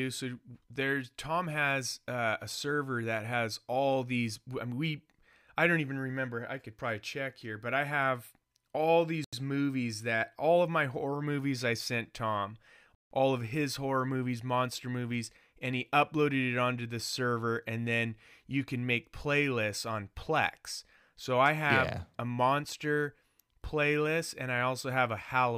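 Speech with two Bluetooth stalls: 83 ms of silence at 9.24 s after "but I have all" and 164 ms at 12.95 s, likely from the receiver's buffer running dry.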